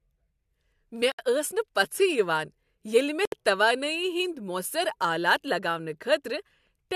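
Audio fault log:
1.12 s and 3.25 s, gap at a join of encoded pieces: the speech breaks off in a gap of about 69 ms each time, then resumes where it stopped, as separately encoded segments were joined with their encoder delay and final-frame padding left in. On a waveform these show as flat gaps with smeared edges, and on a spectrogram as blank vertical bands.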